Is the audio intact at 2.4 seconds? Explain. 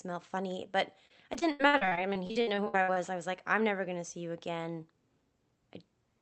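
No, 2.4 s falls inside repeated packet loss (robotic sound) from 1.07 to 2.98 s, just before "I was like I'm". Audio keeps dropping out in gaps of up to 80 ms, and each is patched by extending the previous sound, leaving choppy speech with about a third concealed.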